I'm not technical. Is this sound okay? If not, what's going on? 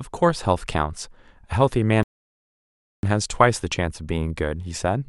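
No. At 2.03 s there's a rebuffering stall: playback ran out of data, went silent for 1 s, then resumed at 3.03 s exactly where the speech stopped.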